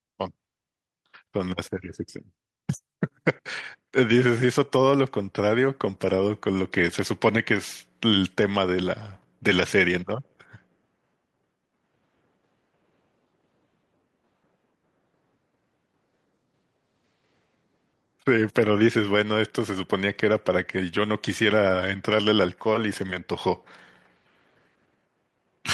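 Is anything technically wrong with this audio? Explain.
No, nothing is technically wrong with this audio.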